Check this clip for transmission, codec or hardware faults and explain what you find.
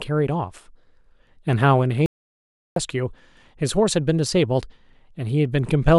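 One fault is present. An audio dropout to silence runs from 2.06 to 2.76 s: the speech stops mid-flow for about 0.7 s into silence with no room tone, likely from a lost input link.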